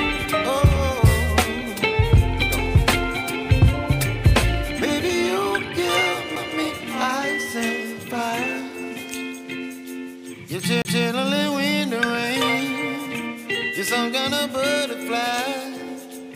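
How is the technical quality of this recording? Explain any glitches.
Two CD skips interrupt the playback. At 6.36 s there is a brief tick with a near-silent gap of a few milliseconds. From 10.82 to 10.85 s a longer mute of about 30 ms follows. Each time, the laser jumps to a different turn of the disc's spiral. The sound then resumes from another point, abruptly.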